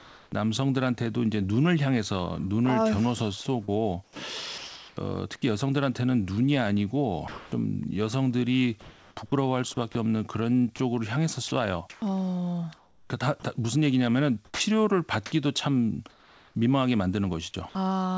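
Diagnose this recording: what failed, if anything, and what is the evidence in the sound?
In call processing, the sender's discontinuous transmission stopped sending during pauses, and the receiver filled them with synthetic comfort noise in place of the background. The real background gives way to steady, featureless hiss from 0.00 to 0.32 s, 8.81 to 9.95 s and 16.10 to 16.55 s, about 2 to 4 dB quieter in the first and last, likely generated from sparse noise updates.

The sender's voice detector flipped between sending and muting more than once, so the speech is chopped by the voice detector from 3.65 to 4.97 s and from 10.76 to 13.10 s. Quiet syllables and word edges drop into comfort noise, likely from a detector threshold sitting near the speech level.

The voice detector likely misjudged quiet speech as background and stopped sending, so sound is dropped by the voice detector at 7.28 to 7.52 s, 9.92 to 9.95 s and 14.45 to 14.60 s. 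Up to 140 ms of speech vanishes into steady noise before the detector likely retriggers. The G.722 call path passes nothing above 8 kHz.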